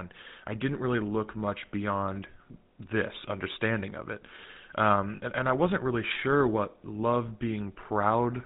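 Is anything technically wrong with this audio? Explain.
Yes, the speech carries two problems: one runs through the whole clip and one is brief.

GSM full-rate codec, throughout: the speech has been coded by a system that models the vocal tract and drives that model with a sparse, regularly spaced pulse train, keeping only a fraction of the excitation detail. The coding damage is plainly audible as a buzzy, gravelly roughness. Nothing above 4 kHz survives, so the speech is also dull and band-limited. The sound fits a 13 kbps GSM full-rate stream.

Lost GSM frames, from 5.16 to 5.21 s: about 40 ms of the stream failed to decode, which fits two consecutive 20 ms frames. The decoder filled the gap by reusing the parameters of the last good frame. Instead of the speech moving on, the preceding sound is briefly held as a rough, metallic ring. It is too short to fade fully to silence before the stream recovers.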